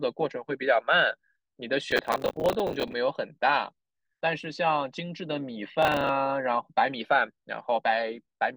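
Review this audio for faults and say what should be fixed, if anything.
Processor overload crackle at 1.91–2.93 s and 5.83–6.09 s: run after run of missed buffer deadlines repeats stale fragments of speech, which points to buffers of around 10 ms, and the hard edges pile up into gritty tearing. Reduce the processing load or enlarge the audio buffer so every block finishes on time.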